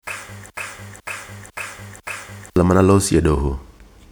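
A player or stream stall likely kept resending one fragment, so from 0.5 to 2.56 s a broken-record loop repeats 0.5 s of speech four times, losing the speech in between.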